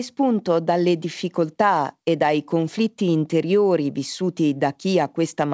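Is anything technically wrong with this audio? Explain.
No, the speech carries no technical fault, and its lack of content above about 8 kHz is simply the normal bandwidth of a wideband call path, consistent with a G.722 codec.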